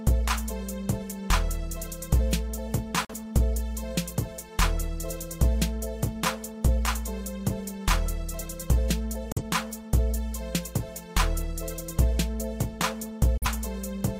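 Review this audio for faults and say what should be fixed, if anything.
Three brief holes, each with a very fast fade to silence over about 3 ms and then recovery, at 3.05–3.14 s, 9.32–9.42 s and 13.37–13.46 s: a digital broadcast dropout. Each gap fits one corrupted frame of about 43 ms that the receiver muted. Improving reception margin or adding stronger error protection would prevent it.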